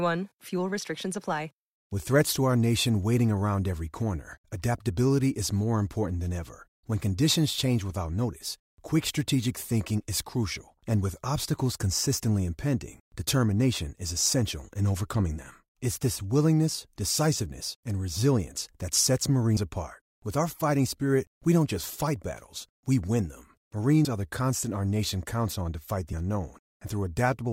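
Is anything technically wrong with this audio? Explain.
Yes, there are compressed frames skipped at 19.57 s after "and resilience that sets", 24.05 s after "battles we win them", and 26.13 s after "counts on to fight". Whole 32 ms frames went missing or were rejected by the decoder: roughly two at the first and last spots, one at the middle. The speech jumps ahead by about 70 ms, 30 ms and 70 ms respectively.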